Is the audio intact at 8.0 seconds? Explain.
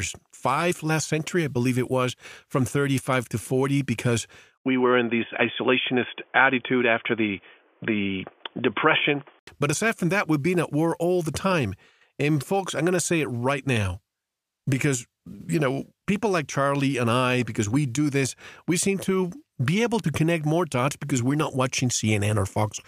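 No. From 4.58 to 9.47 s the input was likely switched to a poorer device. Sound turns dull, cut above 3.5 kHz, with an 80 ms gap and faint new background noise.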